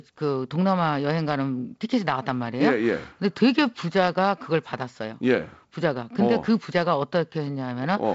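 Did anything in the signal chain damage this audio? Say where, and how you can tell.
No, nothing in the signal chain damaged this audio: the speech comes through G.722 wideband telephone coding at 48 kbit/s, with the band ending near 7.7 kHz as that codec does.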